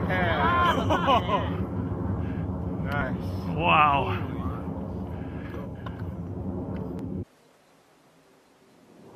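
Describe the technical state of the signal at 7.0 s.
Audio missing between chunks at 6.99 s: a short piece, about 20 ms, drops out and the two sides butt together with no gap, heard as a brief skip. This likely comes from processing in 4.0 s chunks, losing audio at each handover.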